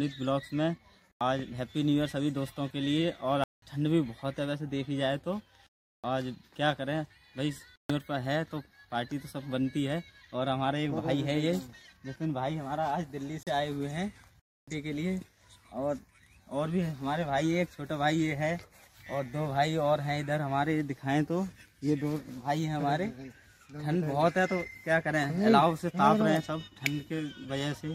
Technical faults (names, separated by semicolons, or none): block of digital silence